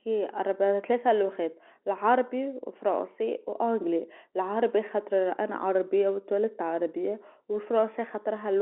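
Nothing technically wrong can be heard in this speech recording. It carries the narrow band of G.711 telephone coding, with sound held between about 200 Hz and 3.5 kHz, which fits a 64 kbps mu-law telephone line.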